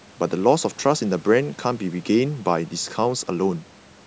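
No technical faults can be heard in the speech. It has passed through call microphone processing, which trims away the lowest bass and leaves nothing above 8 kHz, both normal for that path.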